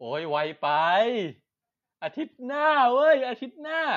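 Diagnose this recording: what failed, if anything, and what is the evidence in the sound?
Automatic gain rising in the call processing stage: from 0.05 to 1.37 s the speech and background swell together by about 4 dB. The AGC judged the input too quiet and ramped its gain up, seen as a slowly widening waveform envelope and brightening spectrogram.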